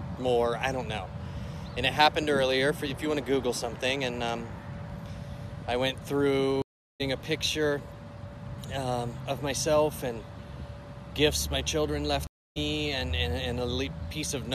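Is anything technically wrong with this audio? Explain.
Yes, there are two stream reconnects. At 6.62 s the sound drops out for 0.38 s and comes back at about 7.02 s; at 12.27 s it drops out for 0.29 s and returns at about 12.58 s. Each time the connection broke, the player went silent, reconnected and started a fresh decoder mid-stream, so the audio resumes roughly a third of a second later and then a fifth of a second later than where it stopped, with the first moment muted or fading in.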